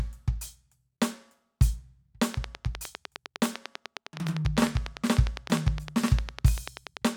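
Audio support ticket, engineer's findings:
Train of clicks, 2.34 to 7.08 s, over the music. Regular ticking at about 10 per second, around fifty clicks. Near-identical pulses, peaking roughly 10 dB above the music. Likely interference from nearby equipment or a faulty connection or power supply injecting repeated pulses.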